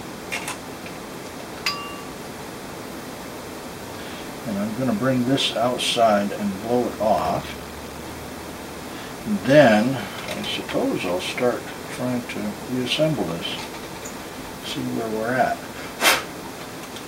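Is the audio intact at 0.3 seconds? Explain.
Yes, the audio at 0.3 seconds is intact, with no dropout, click, distortion or other fault in the signal there.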